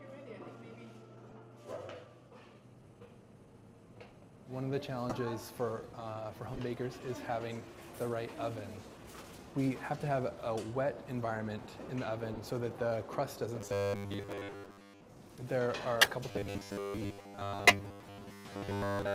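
At 1.23 to 1.32 s, a corrupt frame is decoded. Damaged compressed data is played anyway. A few frames put energy at wrong frequencies. A faint glitch results. Similar bursts follow at 5.09 to 5.16 s, 6.53 to 6.60 s, 10.30 to 10.32 s and 12.33 to 12.40 s. Some are clearly louder.

From 13.61 to 15.01 s, the sound turns into a rigid, metallic buzz at 100 Hz. This is robotic sound from repeated short buffers. Audio likely arrives too slowly, so 10 ms snippets repeat. Most of the real audio is skipped.

Another corrupt frame hits at 16.01 to 16.10 s. It is a loud glitch. The robotic buzz returns at 16.31 s and lasts to the end. During it, a final loud corrupt-frame burst sounds at 17.67 to 17.77 s.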